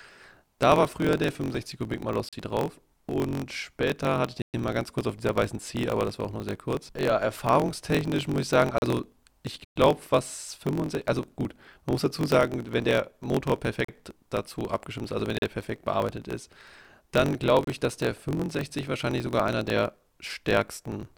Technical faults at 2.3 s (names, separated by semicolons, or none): block size mismatch (truncated); block of digital silence